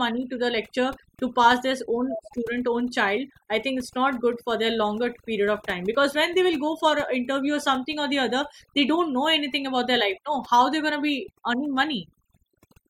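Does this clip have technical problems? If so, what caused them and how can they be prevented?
Yes. Overdone noise removal runs throughout: a noise reducer set far too aggressively pulls individual frequency bands down whenever they sit near its noise estimate, taking the quieter parts of the speech with them. The background drops and breaks up into twinkling specks. To prevent it, reduce the amount of noise reduction and check the result by ear so that the residual noise stays natural and the speech keeps its body.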